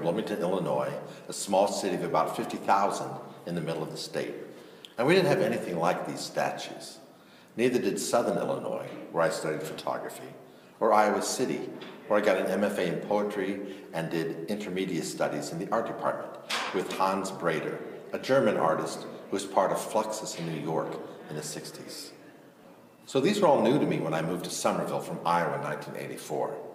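At 2.85 s a corrupt frame is decoded: flipped bits in a couple of compressed frames get played anyway, throwing energy to wrong frequencies as a brief chirp, squeak, blip or burst of noise peaking near -30 dBFS. Unlike a dropout or concealed loss, the damaged frames are played, so spurious sound appears.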